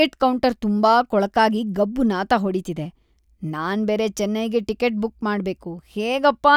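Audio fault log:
The speech signal shows no detectable technical faults.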